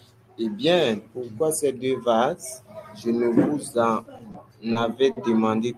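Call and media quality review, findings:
Held sound with a slight buzz or dip, three times late in the speech: 4.31–4.36 s, 4.72–4.77 s, 5.11–5.18 s. Short stall from a late packet. Jitter buffer ran empty; receiver stretched the last sound, 30 ms, 30 ms, then 50 ms, until the packet arrived, then resumed from the same point. Nothing lost, but playout delay grew by the same amounts each time, pointing to arrival jitter on the network path.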